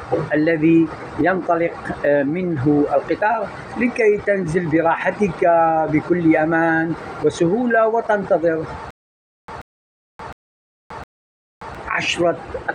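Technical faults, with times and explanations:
8.91 to 11.75 s, stutter with silent gaps: a stall in the player or stream, likely, left it retrying and replaying the last fragment it held before running dry each time. So a burst of about 133 ms repeats four times at an even 711 ms period, with roughly 577 ms of silence after each one. The audio that should have filled this stretch never arrives and is lost.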